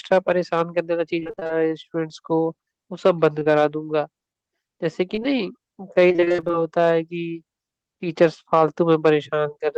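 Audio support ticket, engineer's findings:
Repeated packet loss (robotic sound), 1.19–1.51 s: choppy, robotic stretch. Receiver jitter buffer/decoder concealment. Gaps of up to 22 ms, one after another, about half the span synthesized from the preceding sound before real audio returns.

Repeated packet loss (robotic sound), 6.09–6.55 s: same robotic chop, longer run. Holes up to 23 ms, which fits 20 ms packets, again roughly half the span concealed. Points to a burst of late or dropped packets on the network path.

Short concealed packet loss, 3.39–3.47 s: brief smear or wobble. Decoder concealment filled about 40 ms, two consecutive 20 ms holes, by extending the last sound and then blending back into the real audio. A short consonant in this spot may be lost.

Short concealed packet loss, 5.15–5.23 s: same signature, about 40 ms over two adjacent 20 ms holes. Isolated late or lost packets, not a sustained burst. 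Check the jitter buffer depth and the network loss at both points.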